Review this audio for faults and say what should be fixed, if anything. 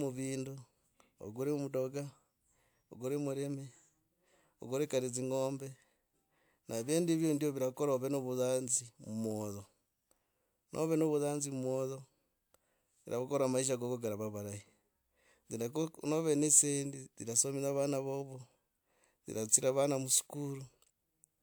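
Nothing needs fixing: the speech signal stays technically sound throughout, with no audible faults to correct.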